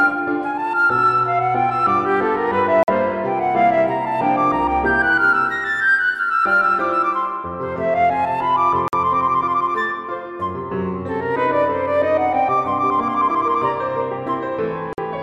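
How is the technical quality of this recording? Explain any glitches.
The recording is interrupted by a recurring gap between chunks. The audio appears to have been delivered in blocks about 6 s long, with roughly 50 ms of silence left at each join, which fits padding or a late start on each block. Holes open at 2.83–2.88 s, 8.88–8.93 s and 14.93–14.98 s. No material is missing, but the sound drops out abruptly and resumes just as sharply at each join, like a hard-edged stutter every 6 s.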